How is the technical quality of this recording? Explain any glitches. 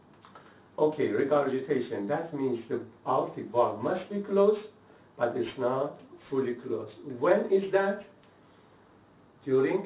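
Aliasing runs throughout. The rate was dropped to what sounds like 8 kHz without a filter, so content above 4 kHz folds back as gritty, metallic tones, roughly 25 dB below the signal.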